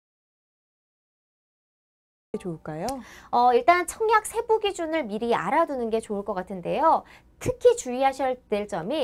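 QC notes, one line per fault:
0.00–2.34 s, audio dropout to silence: the clip opens already in silence with no room tone, then sound cuts in abruptly at 2.34 s. The input was likely lost, through a disconnected device, failed link or mute, while silence kept being written.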